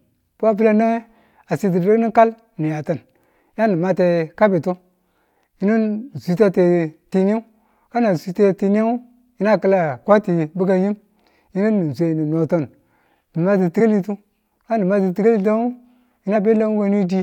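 At 13.79 to 13.81 s and 16.35 s, compressed frames were skipped: around 50 ms, then 20 ms of speech goes missing, heard as brief jumps.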